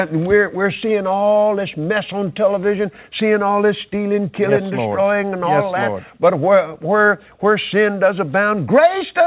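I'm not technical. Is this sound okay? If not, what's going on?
Yes, nothing stood out on listening; it has the narrower, phone-like sound you'd expect from an ordinary call line, with nothing above about 4 kHz.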